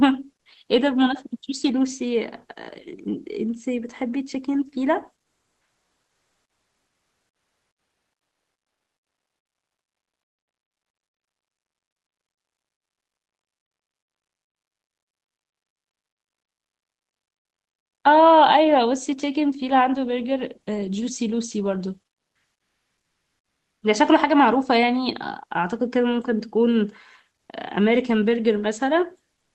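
Comfort noise in place of the background, 5.21 to 18.03 s: steady, featureless hiss about 5 dB quieter replaces the real background, likely from discontinuous transmission.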